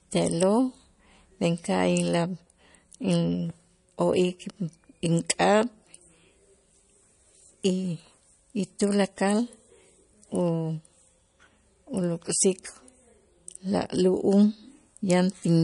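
Speech that's been through heavy lossy coding the whole way, and it's plainly audible: nothing reaches above about 10.6 kHz, so the top end just stops, and the sound has that watery, swirly quality where weak detail flickers in and out from frame to frame. S sounds get a metallic edge and onsets blur. That's likely MP3 compression, and the damage fits a low bitrate around 40 kbps.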